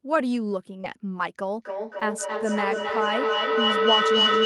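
At 0.81 s, about 20 ms of the speech is lost in transit and covered by short concealed packet loss. The decoder extends the preceding sound for roughly 21 ms, leaving a brief smear. On a spectrogram, harmonics flatten into a smooth strip before real detail resumes. A second gap at 1.99 s is patched for only about 12 ms, giving a shorter smear.

From 1.62 s to the end, feedback echo between two devices sets in. A second device in the room replays the call, and that sound is re-captured with a repeat interval of about 0.3 s. The loop peaks around 5 dB above the speech, so the repeats build up rather than fade. A spectrogram shows stacked, thinning copies of each syllable at that spacing, and the waveform envelope stays thick between phrases.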